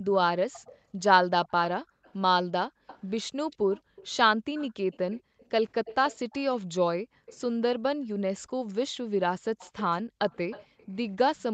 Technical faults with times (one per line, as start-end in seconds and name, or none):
0.10-7.37 echo leak
0.78-0.90 background gated by the echo canceller
1.84-5.40 background gated by the echo canceller
7.01-7.27 background gated by the echo canceller
8.37-9.06 background gated by the echo canceller
8.68-11.54 echo leak
10.03-10.78 background gated by the echo canceller